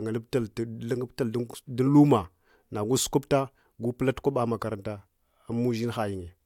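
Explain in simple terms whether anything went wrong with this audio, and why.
Listening to this speech recording, nothing went wrong that I could hear.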